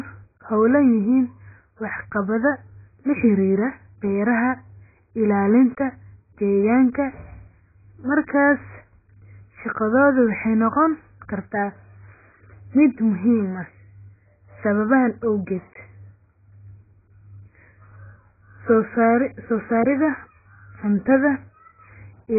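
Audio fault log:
Throughout, AAC compression: speech sounds dull, smeared and warbly with nothing above 2.5 kHz, likely heavy AAC-LC coding at a very low bitrate near 12 kbps.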